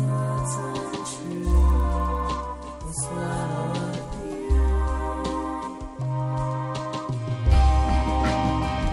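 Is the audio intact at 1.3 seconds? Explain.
No. From 0.8 to 2.3 s the audio has a resampler restarted on every block. The 24 kHz to 48 kHz conversion was applied to each 50 ms block separately, so each block edge was computed without its real neighbouring samples. This leaves a small error every 50 ms, heard as an even tick at 20 Hz that follows the signal. Unlike buffer dropouts, no audio goes missing, and the ticks are strictly periodic rather than scattered.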